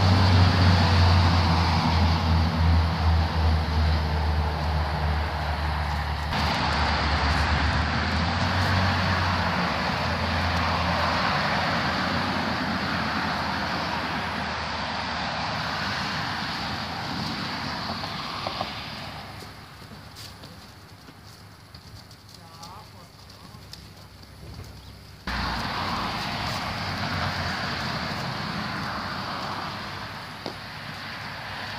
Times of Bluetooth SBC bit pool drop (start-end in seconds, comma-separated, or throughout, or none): 6.52-8.45, 14.43-15.55